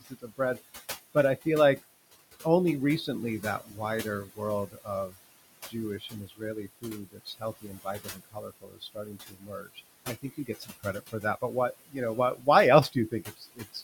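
From the first moment to the end, the speech shows noise suppressor artifacts. The room noise sits about 13 dB below the voice, and the suppressor pulls it down by about 18 dB in the gaps, then lets it back up under each word. Unlike a plain gate, which cuts everything off at once, this works band by band, frame by frame, so the noise sinks and rises rather than clicking off.

The suppressor also mistakes parts of the speech for noise, and those parts sound swallowed. This speech cut by the noise suppressor first happens from 0.01 to 0.59 s, where about a fifth of a second is pulled down by up to about 18 dB. It happens again from 3.41 to 5.15 s, right after "feel like only recently", with roughly half a second dipping by up to about 16 dB. The longest stretch runs from 5.69 to 11.95 s, ending just before "know why". Around three seconds in total fade, by up to about 21 dB. Brief losses follow at 12.35 to 12.47 s, just after "know why", of about 12 dB, and at 12.92 to 13.83 s, of up to about 22 dB. 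Softer consonants and endings go faint, while louder syllables stay, which sets this apart from a dropout that silences everything.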